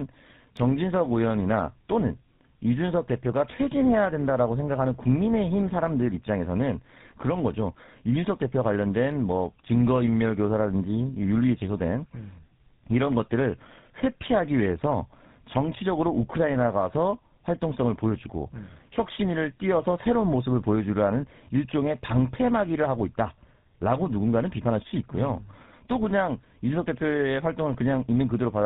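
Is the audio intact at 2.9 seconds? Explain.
No. At 2.9 s the speech carries tandem speech coding, present throughout the clip. It sounds like two passes through a GSM full-rate coder with a G.711 link between, each re-encoding the previous pass's errors. The result is rough, warbly, muffled speech with nothing above 3.8 kHz.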